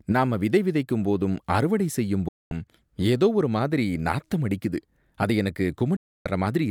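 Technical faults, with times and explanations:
2.28 to 2.52 s, digital broadcast dropout. After "விதைக்கும் போதும் அறுவடை செய்யும்" the sound fades out in about 3 ms and stays silent for about 0.23 s. It returns at "ஏதோ ஒரு மாதிரி நாத்தம்". The receiver muted when frames failed, so that stretch is gone.
5.96 to 6.26 s, digital broadcast dropout. After "நாத்தம் அடிக்குது அது எனக்கு" a second mute lasts about 0.29 s. Both gaps fit the loss of whole 32 ms frames.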